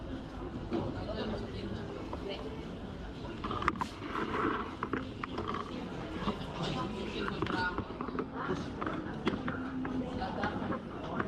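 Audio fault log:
No faults found: the signal stays continuous throughout, with nothing that calls for an entry.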